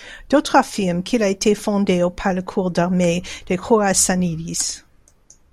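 No technical faults can be heard anywhere in this speech recording, and the signal holds steady throughout.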